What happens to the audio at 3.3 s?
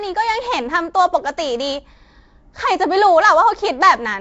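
At 3.3 s the speech carries the same damage heard across the whole clip, likely Nellymoser compression at a rate consistent with 32 kbps. Coarse block coding starves weak bands, which come back as noise, giving a rough, hissy, smeared sound with nothing above 7.7 kHz.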